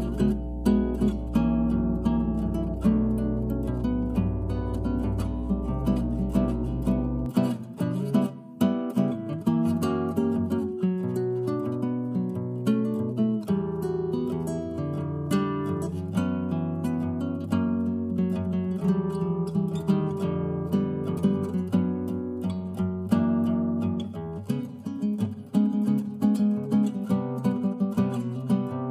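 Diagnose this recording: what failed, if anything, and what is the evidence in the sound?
Mains hum from 0.0 s to 7.26 s: a steady 60 Hz tone sits under the audio from the very start, roughly 5 dB below the wanted signal, then disappears at 7.26 s. This is an analogue wiring fault. A ground loop or a nearby transformer coupled the power line into the signal path ahead of the converter, so the line frequency was recorded along with the audio.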